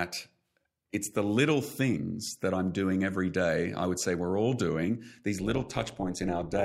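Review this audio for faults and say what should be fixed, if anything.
Overlap-add ripple runs from 5.40 s, just after "we're all doing these", to the end at 6.65 s. Frames were rejoined with an overlap that doesn't sum to constant gain, so the level swings about 11 dB at around 150 Hz, giving a metallic buzz with extra tones around each note. Unlike dropouts, the sound never vanishes, and the pulsing stays strictly periodic. To prevent it, choose a window and hop size that sum to a constant gain when overlap-added.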